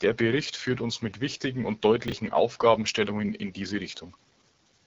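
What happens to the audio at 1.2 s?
At 1.2 s the speech carries the AMR wideband (HD Voice) codec damage present throughout: a rough, raspy model-coded sound, nothing above 7.7 kHz, consistent with a low 8.85 kbit/s rate.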